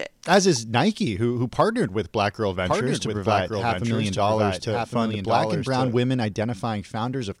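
From 2.65 s to 5.95 s a doubled audio track appears: a second full-band copy of the speech trails about a second behind, roughly 5 dB quieter, starting and stopping abruptly with no decay. It likely comes from a slower second capture path. On a spectrogram, each speech pattern repeats, shifted and slightly fainter.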